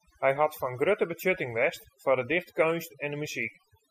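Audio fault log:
Throughout: overdone noise removal. The speech sits over a background pulled down, with small twinkling specks where isolated frequency bands flicker in and out. A noise reduction stage set too aggressively is cutting individual bands whenever their level comes close to its noise estimate, and the quieter components of the voice fall under that threshold and are removed along with the noise.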